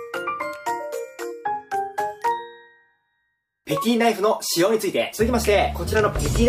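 No technical faults are audible.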